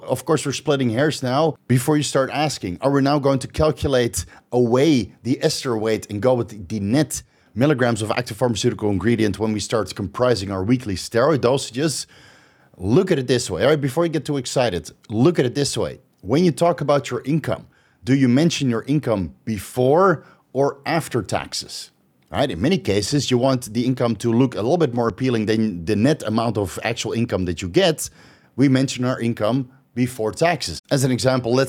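No technical faults are audible anywhere in the recording.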